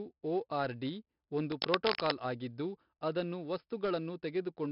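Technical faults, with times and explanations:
Throughout, 4-bit ADPCM compression. Each sample is coded as a small 4-bit step from a predicted value, and the step size adapts as the speech changes. The coding error is heavy here. It rides on the speech as a gritty hiss that swells with every loud syllable. Sharp onsets sound rough because the step cannot grow fast enough to keep up. Nothing remains above 5.3 kHz, so the speech is dull. That ceiling and the grain point to a low sample rate and a bitrate near 44 kbps.
1.51 to 2.15 s, cable scratch noise. Dense, uneven bursts of crackling and rustling sit over the speech for about 0.63 s. They are somewhat louder than the speech itself. The likely cause is a worn cable, connector or control being moved. Its contact resistance jumps about rapidly, which adds ragged noise to the signal until the contact settles.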